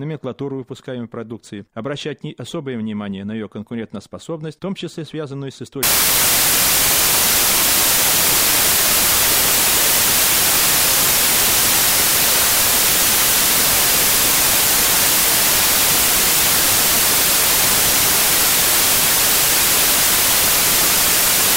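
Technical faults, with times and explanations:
5.83 to 21.56 s, samples built from the wrong bytes: just after "том числе связанную с", the reader starts assembling each sample from mismatched bytes, whether shifted by one, swapped in order or misaligned, and it stays that way to the end. The rapidly fluctuating low-order bits now land in the most significant position, so the speech gives way to loud, harsh broadband noise.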